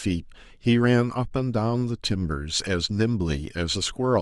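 Listening closely to the speech, nothing stood out as a technical fault at any point.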